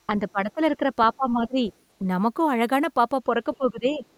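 From 0.10 to 0.91 s, 1.16 to 1.63 s and 3.57 to 4.04 s the speech dips, by roughly 10, 20 and 15 dB. This is speech suppressed in double talk, likely an echo canceller attenuating the near talker while the far side spoke.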